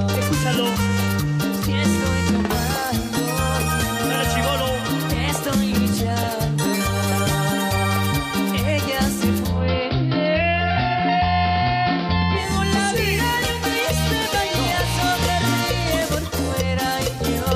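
A digital radio blend to analogue runs from 9.40 to 12.58 s. The receiver lost its digital stream and cross-faded over about 230 ms to the station's AM broadcast, then returned to digital. During that stretch the sound turns dull, and a faint hiss sits well beneath it, around 35 dB down. The loudness stays the same across both transitions.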